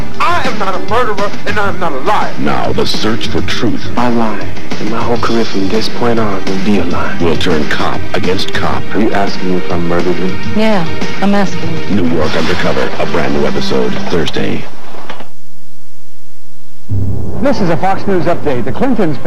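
Nothing in the audio points to a technical fault. There are no times or causes to report.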